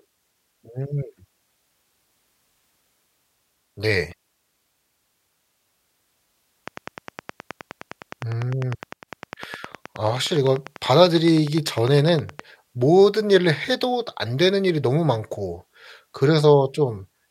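From 6.68 s to 12.41 s there's a train of clicks running under the speech: sharp, near-identical ticks at a steady 9.8 per second, around fifty in all, poking a few decibels above the voice and just as audible in the gaps. That evenly spaced, same-shaped pulsing most likely comes from interference from nearby gear or a faulty connection or power supply, injecting a spike on a fixed cycle.

Partway through that stretch, from 8.93 s to 9.08 s, one channel drops out for about 0.15 s. With the stereo folded to mono, everything the two sides shared suddenly sits about 6 dB lower, so the speech briefly ducks and then snaps back. A likely culprit is a momentary loss of one leg of the stereo path.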